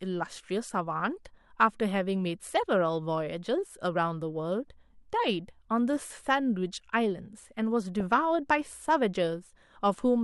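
A speech clip with DAB burbling from 8.00 to 8.10 s: a short burst of burbling where weak reception let bit errors slip past error correction, putting short blips of noise into single sub-bands, which points to roughly ten corrupted frames at a bit error rate of about 0.2 percent.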